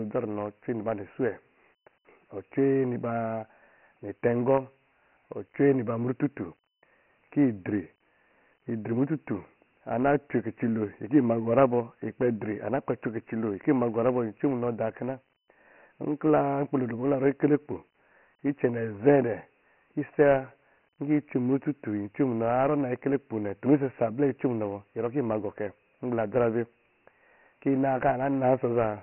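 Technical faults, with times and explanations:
Throughout, Dialogic VOX ADPCM: nothing remains above about 3.1 kHz, which fits 4-bit ADPCM at 6,000 samples a second, and a heavy gritty hiss rises and falls with the speech. That signal-tracking grit, rather than a clean narrow band, separates it from simple telephone band-limiting.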